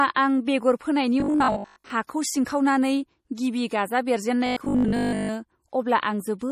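Speech, with a watery, swirly quality throughout that sounds like MP3 compression, likely at a low bitrate near 40 kbps; a spectrogram shows flickering high-frequency patches. From 1.20 to 1.90 s, and again from 4.47 to 5.35 s just after "गिबि गाजा", the sound becomes a rigid metallic buzz at 50 Hz, robotic sound from repeated short buffers, which fits a repeated 20 ms buffer. Most of each stretch is repetition, so the waveform shows identical 20 ms cycles. At 2.07 s a pre-echo puts a short hiss about 20 ms ahead of an attack, visible as smeared energy before the onset.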